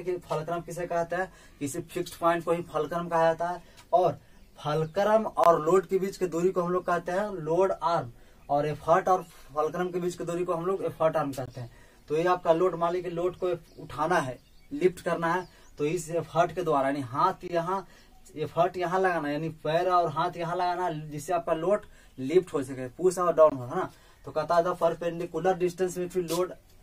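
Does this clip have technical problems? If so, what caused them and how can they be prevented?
Yes, there's a gap between chunks: 20 ms hard-edged holes at 5.44, 11.46, 17.48 and 23.50 s, where silence sits between 6-second pieces at each join. Make sure playback or stitching joins chunks seamlessly, trimming padding and scheduling each chunk without delay.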